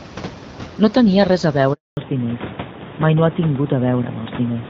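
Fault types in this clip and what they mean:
Handover gap: The call was passed from one network to another, and no speech frames arrived while the link changed over. The speech dies away within a few tens of milliseconds at 1.73 s and stays silent for 240 ms until the new link picks up at 1.97 s. A packet-loss dropout would usually be filled with smeared or repeated sound, but this is a clean hole. Its close tie to the bandwidth change that follows marks it as a handover.
Fallback to narrowband: From 1.97 s to the end, the call runs on an older narrowband codec instead of HD Voice. Everything above 4 kHz is gone, and the speech turns duller and rougher than the wideband section before the gap. That section, which fits AMR-WB at about 12.65 kbit/s, keeps audible detail up to around 7 kHz. A gradual bitrate drop would not cut the top off this suddenly. Here the ceiling falls in one step at the handover and stays there, which fits a switch to AMR-NB.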